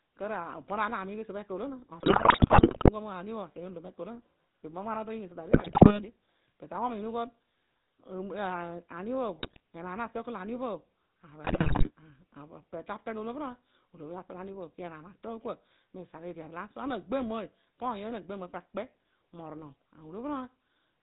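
The whole clip runs through the GSM full-rate codec, and it's plainly audible: the speech has that buzzy, gravelly edge from a vocal-tract model fed with sparse regular pulses, and nothing gets through above 4 kHz. That all fits the old 13 kbps full-rate coder.

On top of that come GSM bit errors, at 2.0 to 2.9 s, 5.5 to 6.0 s, 9.36 to 9.6 s and 11.44 to 11.90 s. Corrupted filter, pitch and gain values wreck individual frames, so the speech breaks into squawks, pops and gargling. The bursts at 2.0 s and 11.44 s have the highest bit error rate, around 6 percent.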